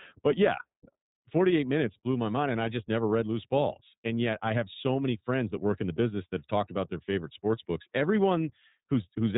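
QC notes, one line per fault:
Throughout: iLBC codec. The speech is confined to a narrowband channel with nothing above 3.8 kHz, so sibilants and fricatives lose their top end and sound dull. Each frame's excitation is coded independently, which gives the speech a mildly rough, synthetic grain that is plainly audible across the clip. The coarseness and frame rhythm fit the 13.33 kbps mode with 30 ms frames. Pitch and intelligibility survive, but the natural texture of the speech does not.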